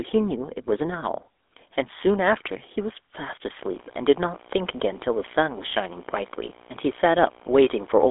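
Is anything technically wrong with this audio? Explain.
Yes, there are two faults. Throughout, the GSM full-rate codec gives the speech a buzzy, gravelly roughness. Coarse pulse-driven excitation and a frame-by-frame vocal-tract model, consistent with 13 kbps, leave nothing above 3.8 kHz. From 3.58 s to the end, video or display buzz appears. A screen or cable couples a 59.94 Hz field-rate buzz with hash, plus a 15.7 kHz line tone, roughly 25 dB below the speech.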